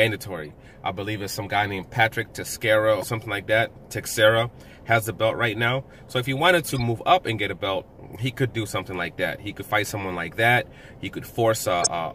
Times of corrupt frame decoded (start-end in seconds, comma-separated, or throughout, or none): 0.45-0.52, 3.01-3.10, 6.66-6.82, 11.81-11.87